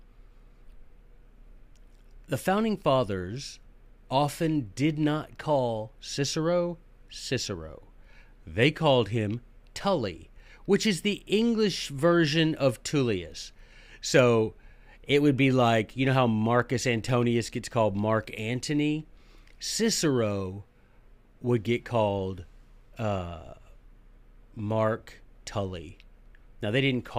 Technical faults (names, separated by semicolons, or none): none